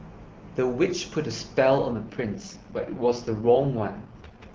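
From 1.92 s to the end, an AMR rate drop makes the speech rough and raspy, fitting a fall to 6.6 kbit/s; the spectrogram keeps its full band and the waveform shows no gap.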